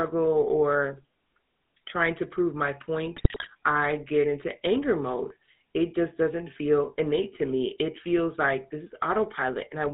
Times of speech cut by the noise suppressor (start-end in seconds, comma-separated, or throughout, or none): none